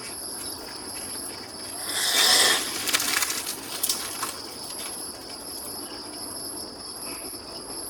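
Right through the audio there's a steady buzz at about 46.9 Hz, the signature of a block size mismatch (padded): one stage hands over blocks shorter than the next one reads, which fits 1024-sample reads being zero-filled, so everything drags to 0.938x speed with the timbre intact.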